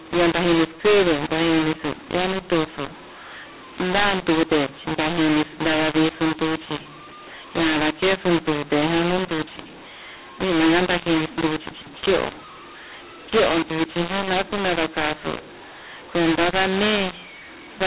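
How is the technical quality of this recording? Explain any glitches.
The quality is poor throughout, because of a single decoding fault. Throughout the speech, mu-law and A-law are mixed up: audio written as mu-law is read back as A-law, scrambling sample levels so speech sounds harsh and distorted, quiet stretches are lifted into a hiss, and pauses fill with noise. The 4 kHz telephone band of the G.711 coding itself is still audible beneath the distortion.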